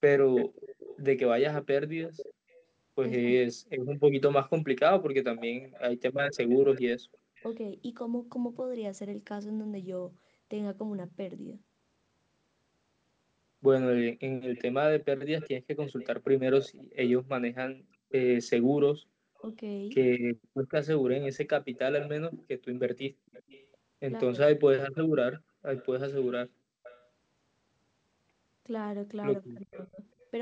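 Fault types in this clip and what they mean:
Echo leak: A faint second copy of the speech trails the talker by a steady 389 ms in three stretches, 0.36 to 7.51 s, 14.55 to 19.41 s and 21.22 to 27.06 s. It sits about 15 dB below the speech at first, then about 20 dB, then about 25 dB. The likely cause is a loudspeaker on one end whose echo canceller let part of its microphone pickup return. Reverberation decays smoothly, but this is a distinct repeat at a constant lag.
Speech suppressed in double talk: At 5.4 to 5.75 s and again at 29.65 to 30.0 s, the speech is pushed down sharply while the other side talks over it. It drops by roughly 25 dB at its deepest, affecting about a third of a second each time. The likely cause is an echo canceller that could not tell its own talker from the loudspeaker echo and attenuated both. A network dropout ends in silence or glitches, but here the level ducks and then recovers during the overlap.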